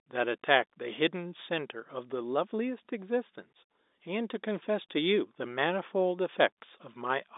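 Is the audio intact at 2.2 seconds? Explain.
Yes, the audio is intact at 2.2 seconds, with nothing there beyond the narrow band of the G.711 telephone coding it passes through.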